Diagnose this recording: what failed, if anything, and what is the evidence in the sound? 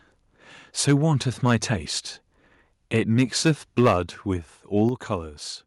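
The loudest syllables break up with a harsh, crackling edge at 0.88–0.94 s, 1.45–1.55 s, 2.95–3.51 s and 3.78–3.94 s. This points to microphone overload at the converter stage, most likely from input gain set too high. Peaks push about 4 to 6 dB past full scale and their tops are sheared off. The waveform shows flat-topped plateaus, most frequent in the last burst. The spectrogram shows broadband vertical smearing above the speech harmonics.

Twice the whole level, speech and background together, suddenly drops: by about 3 dB at 3.88 s, right inside the last distorted peak, and by about 5 dB at 4.89 s. This is the microphone volume stepped down in single jumps. Call processing likely reacted to the clipping by cutting the device's input gain. On the waveform, the envelope abruptly shrinks at each point and stays lower. A spectrogram shows every band dimming at once, leaving a clean vertical boundary.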